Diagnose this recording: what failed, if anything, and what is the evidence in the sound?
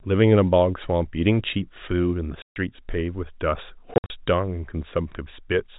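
The failure is in the network stage: packet loss filled with silence. The speech drops out completely from 2.42 to 2.56 s, about 140 ms, which fits seven 20 ms packets. A second, broken-up loss from 3.94 to 4.1 s removes about 120 ms in short holes, the longest 60 ms. On a waveform these are flat silent stretches with abrupt edges. On a spectrogram they are blank vertical bands in the telephone-limited, below-4 kHz G.711 audio.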